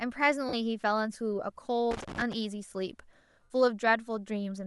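A breathy, grainy edge sits on the speech from start to finish, with the upper spectrum thinned and patched with hiss. This is plainly audible Bluetooth LC3 compression, likely from the LE Audio transform codec, with a texture that fits short 7.5 ms frames at around 48 kbps.

From 0.48 to 0.54 s the speech briefly turns into a noisy smear for about 45 ms. These are lost LE Audio frames: the decoder filled the gap by repeating the last spectrum with random signs and fading it.

From 1.91 to 2.33 s an irregular burst of scratchy crackle chops through the signal. This is loose connector crackle, where a worn or dirty contact rapidly makes and breaks as it shifts, breaking the signal into fragments.

The same smearing returns at 3.44 to 3.50 s, this time lasting about 67.5 ms. These are again lost LE Audio frames, and over the longer gap the concealed sound fades after the first few frames.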